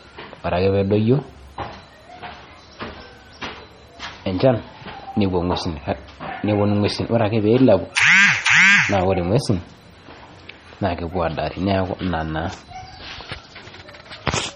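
Speech clip, likely squeezed through heavy MP3 compression at a low bitrate throughout: nothing survives above 12.7 kHz, and sparse frequency lines flicker between frames, leaving a watery, swirly texture with metallic chirps on s sounds.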